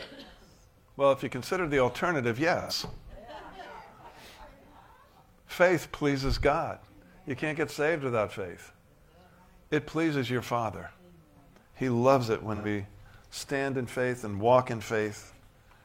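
At 2.61 to 2.73 s and 12.55 to 12.65 s, AAC frame loss with concealment leaves smeared, noisy patches. They last about 85 ms, which fits two lost frames. The decoder rebuilds the gap from the last good spectrum. A shorter 43 ms patch follows at 15.24 s.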